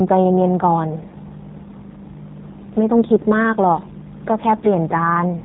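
Throughout, the G.729 codec at 8 kbit/s leaves the speech plainly rough and synthetic, rebuilt from pulses and filters; the spectrogram shows nothing above 4 kHz. From 1.10 to 1.14 s, VoIP packet loss concealed by the speech codec stretches the sound into a brief smear, which fits one lost 10 ms frame. The waveform dips and stays weak until the decoder recovers.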